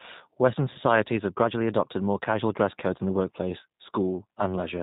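From the start the whole clip carries plainly audible G.729 codec damage. Everything above 4 kHz is gone, and the speech is rebuilt from a vocal tract filter and a few pulses per frame. That leaves it rough and a bit synthetic, which fits 8 kbit/s G.729A.

At 0.73 to 0.78 s there's a dropout covered by VoIP packet loss concealment. About 20 ms went missing, which fits a single lost packet. The decoder carried its last pitch and filter forward with falling gain, so there's a short stretched sound that fades, and the speech sounds weak for a moment as the codec recovers.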